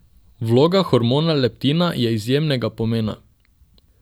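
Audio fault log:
No faults detected.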